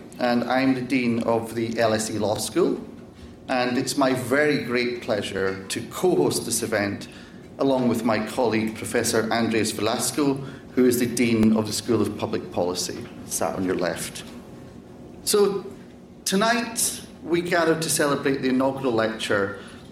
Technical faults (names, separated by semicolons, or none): overlapping chunks